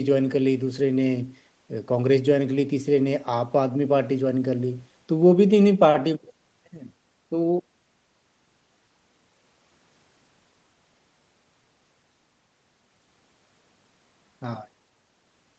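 No technical faults occur at any point in this speech, so there is nothing to describe in time order.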